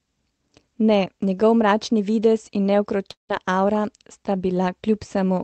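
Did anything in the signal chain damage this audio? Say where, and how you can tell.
Yes, network stage: from 3.11 to 3.31 s the sound decays into a fading buzz, then silence, likely a long network dropout. Brief packet loss wouldn't reach silence.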